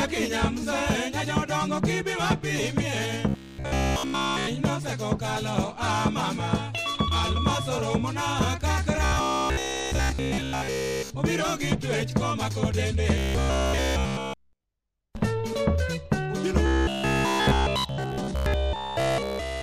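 Robotic sound from repeated short buffers occurs at 3.29–4.47 s, 9.05–11.10 s, 13.18–14.64 s and 16.66–19.62 s. Throughout each span, the sound collapses into a rigid metallic buzz at 66.7 Hz, likely from a roughly 15 ms buffer being replayed while new audio was skipped.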